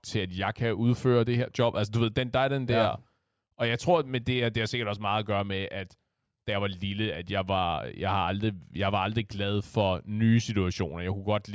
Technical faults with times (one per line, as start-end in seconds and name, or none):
none